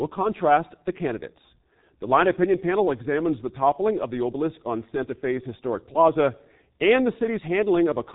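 From start to end, the speech carries heavy G.723.1 codec damage. The codec squeezes each 30 ms frame into very few bits, which fits a rate near 6 kbit/s, and nothing survives above 3.8 kHz. The voice sounds muffled and hoarse, with smeared consonants. A plain low-pass filter would dull the sound without adding that rough, slowly shifting buzz, which comes from the voice model lagging behind the speaker.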